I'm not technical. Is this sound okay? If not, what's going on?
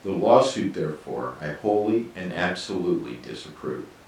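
Yes, no faults are audible.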